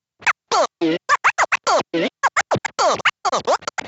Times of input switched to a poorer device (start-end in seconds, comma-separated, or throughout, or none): none